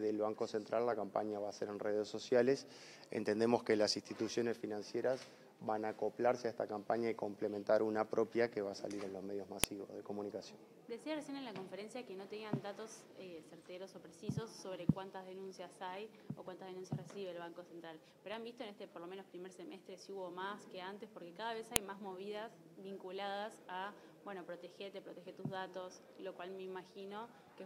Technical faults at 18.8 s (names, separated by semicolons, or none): none